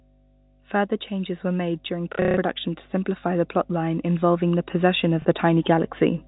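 Mains hum runs under the entire speech clip: a steady 50 Hz tone with low harmonics, roughly 20 dB below the speech. A ground loop or nearby transformer is coupling the power line into the signal, so the drone never lets up.

From 2.13 to 2.37 s there is packet loss with the last packet repeated. About 210 ms is lost across 240 ms, with the longest run 150 ms. The receiver replays stale audio, and the run buzzes like a robotic stutter, consistent with roughly 30 ms packets.

Automatic gain rising begins at 3.22 s and continues to 6.23 s. The gain control judged the input too quiet and raised it by about 6 dB, so speech and the hum swell together gradually over those three seconds.

A single 30 ms loss at 5.22 s repeats the last packet once more, producing a small blip.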